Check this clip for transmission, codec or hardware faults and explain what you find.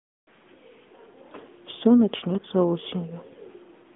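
The speech has gone through the AMR narrowband mobile codec (AMR-NB) for its whole length. The encoder samples at 8 kHz and rebuilds speech from a vocal-tract model driven by a few pulses per 5 ms subframe, so everything above the 3.5 kHz line edge is gone and little below 200 Hz survives. The damage is plainly audible as a thin, boxy, buzzy and synthetic tone. That level of artefacting fits a mid-rate mode of about 10.2 kbps.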